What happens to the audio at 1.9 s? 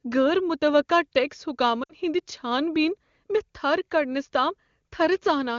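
Lost AMR speech frames, 1.83 to 1.94 s: about 60 ms of speech (three 20 ms frames) failed decoding, so the decoder repeated prior settings with falling gain, giving a drop to near silence within two frames, with the voice returning weak or rough for a moment.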